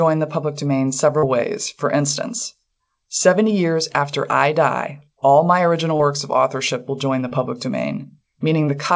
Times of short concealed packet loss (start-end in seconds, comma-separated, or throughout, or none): 1.19-1.25, 5.96-6.02, 7.28-7.34